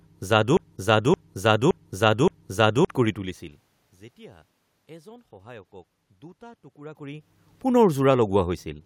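From 0.57 s to 2.87 s, a broken-record loop replaces the speech: a 0.57 s fragment repeats exactly, back to back, four times, and the audio due in that span is lost. The likely cause is a stalled player, encoder or stream resending its last fragment.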